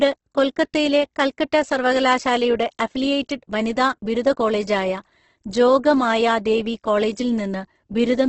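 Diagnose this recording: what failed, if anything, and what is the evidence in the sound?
The codec stage failed: the speech is grainy, rough and noisy across its whole length, with no clean stretch, and nothing survives above 8.2 kHz. The likely cause is Opus compression at a very low bitrate, around 12 kbps, coding in its transform (CELT) mode. Starved of bits, the encoder fills bands by folding or noise. On a spectrogram the bands look filled rather than holed, with a flat cutoff at 8.2 kHz.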